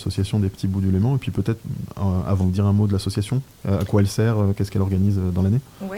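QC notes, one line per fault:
2.41–2.43 s, skip ahead: About a second of audio is dropped. Playback jumps forward with no gap, joining the two sides almost directly, so the sound lurches abruptly.
2.51–5.52 s, jitter buffer speed-up: The receiver trims many pitch-period pieces to shed excess buffered delay. Audio runs at about 115% speed without a pitch change and sounds hurried. Roughly half a second is removed.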